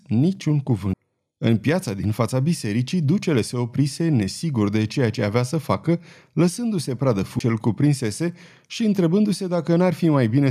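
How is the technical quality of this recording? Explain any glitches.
Two glitches stand out, at 0.93 s and 7.39 s. Each is a brief tick with a near-instant dropout, a few milliseconds at the first and about 10 ms at the second, after which the speech resumes from a different point. These are CD skips: a knock or a disc flaw threw the laser onto another turn of the spiral, so the player muted momentarily and carried on reading from the wrong place.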